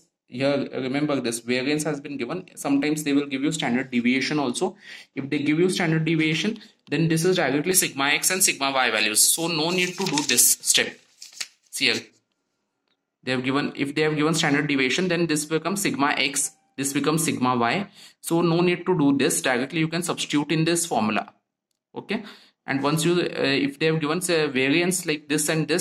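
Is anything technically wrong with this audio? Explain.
Yes. From 7.72 to 12.1 s there is pre-emphasis left on: the treble lift applied before transmission was never undone by the matching de-emphasis, leaving 10 kHz about 11 dB above 1 kHz, which fits a J.17 curve. That stretch sounds thin, bright and sibilant.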